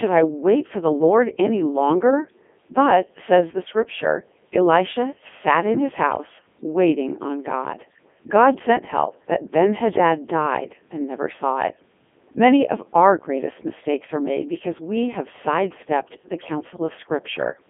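Speech, run through a Codec 2 vocoder at 3.2 kbit/s for its whole length, so it comes out robotic and buzzy, rebuilt from sine waves off pitch and envelope data. It's squeezed into roughly 250 Hz to 3.5 kHz, nothing above 3.7 kHz.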